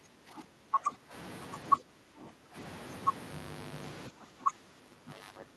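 Speech suppressed in double talk occurs at 0.00–1.13 s, 1.79–2.56 s and 4.09 s to the end: the speech dips by up to about 15 dB, likely because an echo canceller confused it with loudspeaker echo while both sides talked and turned it down.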